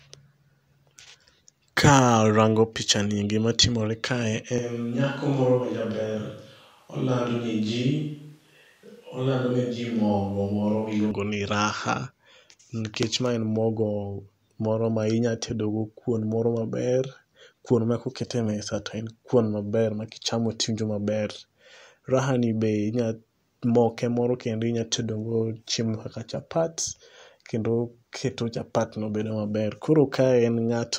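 From 4.58 to 11.11 s, the speech turns abruptly hollow and roomy, about 5 dB quieter. The cause is likely a switch to a distant microphone.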